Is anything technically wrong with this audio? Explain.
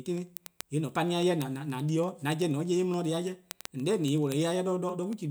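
Yes. From 0.13 s to 5.27 s the speech carries word clock ticks: a receiver free-running against the sender's clock slips one sample roughly every 50 ms, about a hundred times. The steady, sharp, uneven clicks point to a mismatch of roughly 400 ppm.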